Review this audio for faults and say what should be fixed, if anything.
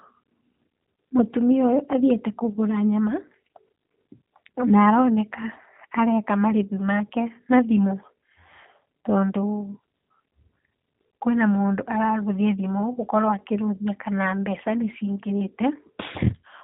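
The whole recording carries G.729 codec damage: the speech is band-limited with nothing above about 4 kHz, and it sounds plainly rough and synthetic, which fits an 8 kbit/s G.729A stream. The codec rebuilds each 10 ms frame from a vocal tract filter, a pitch predictor and a few pulses rather than the actual waveform. A plain telephone low-pass would stay smooth and natural, but this buzzy, rebuilt texture points to the codec. Record or route the call with a wideband codec such as G.722 or Opus instead.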